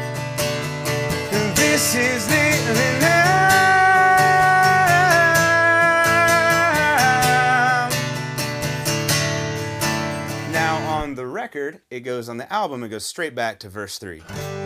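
Nothing in this audio stood out as a technical problem on listening.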